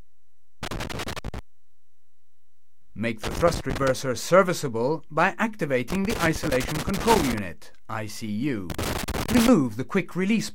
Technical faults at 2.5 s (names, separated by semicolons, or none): none